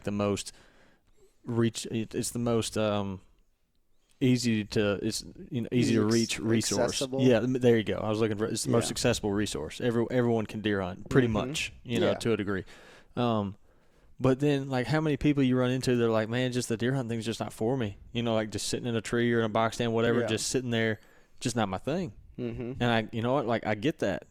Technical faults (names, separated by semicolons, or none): overlap between stream segments